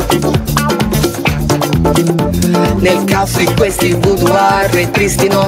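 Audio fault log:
Throughout, gain pumping: the gain swings about 5 dB, pulled down under each loud sound. Excess gain feeding a fast limiter is likely.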